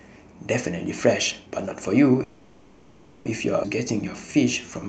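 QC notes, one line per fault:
2.23 to 3.27 s, call audio freeze: the sound stalls for about 1.02 s while the last fragment is stretched into a fading buzz or hiss, then resumes exactly where it stopped with nothing lost. Likely late packets draining the jitter buffer, unlike a skip, which removes audio rather than inserting a pause.
3.63 s, skip ahead: playback jumps forward with almost no gap, and roughly 0.7 s of audio is gone, its two edges butted together. This sheds about 0.7 s of delay. The abruptly joined content, not a pause, sets it apart from a freeze.
4.11 to 4.88 s, jitter buffer slow-down: the closing stretch plays at about 89% speed, adding 92 ms, with drawn-out sounds at unchanged pitch. The buffer is rebuilding its reserve. Steady pitch distinguishes it from a tape-style slowdown, which would drop in pitch.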